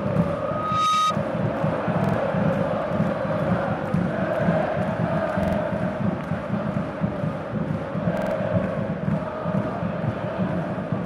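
From 0.33 to 1.16 s a loudspeaker feedback squeal appears: a tone at 1.2 kHz, where the loop gain exceeded one, swells over roughly half a second to sit about 5 dB above the sound. A spectrogram shows one bright horizontal line thickening.

At 2.04 to 2.14 s, 5.43 to 5.57 s and 8.17 to 8.31 s, repeated buffer stutters occur. A 46 ms segment, which fits a 2048-sample buffer, plays two, three and three extra times, losing roughly 0.1 to 0.15 s. The waveform shows identical copies with hard joins.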